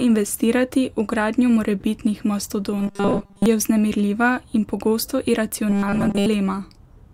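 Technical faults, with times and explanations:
2.78–3.46 s, robotic sound from repeated short buffers: after "v gradnjo morebitnih", speech becomes a rigid 200 Hz metallic buzz, likely from repeating 5 ms buffers, until "je vznemirljiva".
5.70–6.27 s, robotic sound from repeated short buffers: the same 200 Hz buzz returns, likely with most of the audio replaced by repeats, so speech only roughly survives.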